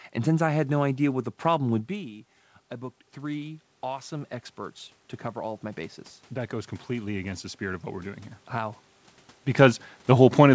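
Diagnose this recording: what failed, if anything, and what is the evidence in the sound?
The fault is in the call processing stage: automatic gain rising. Just after "three awesome experts to", the input drops by about 13 dB. From 5.34 to 8.88 s the AGC slowly lifts its gain by about 5 dB, so the speech and room noise swell together.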